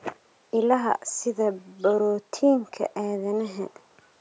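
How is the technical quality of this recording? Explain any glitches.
No glitches detected; the speech carries the usual call microphone processing, with the lowest bass filtered out and nothing above 8 kHz, which is normal for that path.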